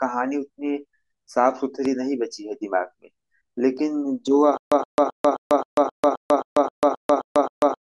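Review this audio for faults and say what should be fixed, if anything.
From 4.58 s to the end of the clip, the speech breaks into a stutter with silent gaps. A 122 ms fragment plays, then about 142 ms of dead digital silence follows. The cycle repeats every 264 ms, twelve times in all. The likely cause is a stalled player or stream that replays its last buffered fragment at each retry and then runs dry. Everything that should have played after 4.58 s is missing. Prevent it by giving the stream enough buffering and a recovery path that resumes with fresh data instead of looping the stale buffer.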